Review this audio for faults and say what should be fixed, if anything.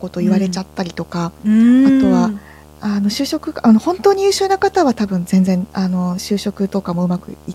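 Video or display buzz runs under the speech for the whole clip: a steady buzz at 75 Hz with hash riding above it, sitting roughly 25 dB below the speech. The rate points to a monitor or video cable refreshing at 75 Hz and coupling its field-rate switching currents into the audio path, either through a shared ground or by proximity to an unbalanced line. Prevention: reroute audio cabling away from display and video leads and fix the grounding between the display and the audio chain.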